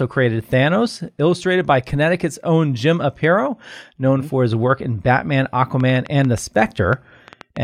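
A speech recording with a train of clicks over its final stretch, from 5.80 s to 7.58 s. About fifteen sharp, similar-shaped ticks arrive at roughly 6.8 per second but unevenly spaced, popping out around 5 dB above the speech and staying audible in the gaps between phrases. The steady pulse shape and repetition point to an external source, likely electrical interference from nearby equipment or a faulty connection or power supply.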